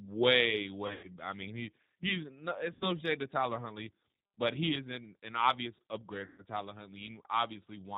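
From start to finish the speech passes through the G.729 codec at 8 kbit/s, and the damage is plainly audible: a rough, slightly synthetic texture from a voice rebuilt out of a filter, a pitch predictor and a few pulses. A spectrogram shows a hard ceiling with nothing above 4 kHz.

VoIP packet loss concealed by the speech codec then strikes three times. From 0.87 to 1.10 s, just before "I mean he he's", 120 ms goes missing, scattered over 160 ms with a longest run of 100 ms. From 2.73 to 2.89 s, between "mean he he's no" and "shade to", 80 ms is lost. From 6.26 to 6.43 s, right after "an an obvious upgrade", another 120 ms is lost. Each time the decoder stretches its last pitch and filter into a buzzy tone or coloured noise that fades. A waveform shows a decaying, repetitive envelope, and a spectrogram shows smeared, flattened harmonics where the speech should be.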